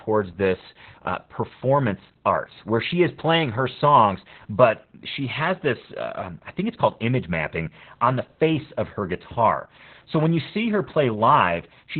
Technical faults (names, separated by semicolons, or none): Opus voice compression